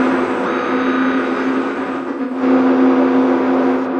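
Between 1.72 and 2.42 s the stream suffers AAC frame loss with concealment: several frames go missing, about 0.3 s of audio in total, scattered across roughly 0.6 s, with no single gap longer than about a tenth of a second. The decoder patches each hole from the last good spectrum, so the sound turns smeared, noisy and phasey in short flickers rather than dropping to silence, then clears once intact frames resume.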